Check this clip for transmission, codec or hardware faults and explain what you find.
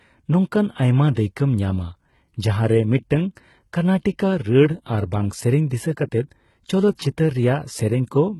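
Two codec faults are audible in this speech clip.

Throughout, the treble is gritty and lispy, with nothing above 11.8 kHz. This is likely HE-AAC compression: band replication rebuilds the highs, and the heavy damage fits roughly 16 kbps.

At 1.14 to 1.17 s there is pre-echo. A short hiss smears about 23 ms ahead of an attack, because the block's quantisation noise fills the quiet moment before it.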